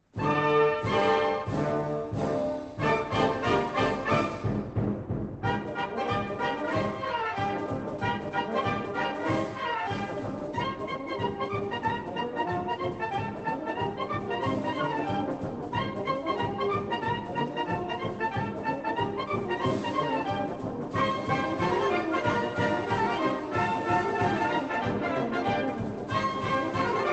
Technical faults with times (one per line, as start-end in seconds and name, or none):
none